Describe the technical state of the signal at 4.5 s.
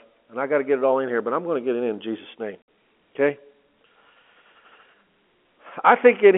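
At 4.5 s the speech is intact, carried through G.711 A-law telephone coding that confines it to the usual line band of roughly 250 Hz to 3.4 kHz with no fault in the signal at that point.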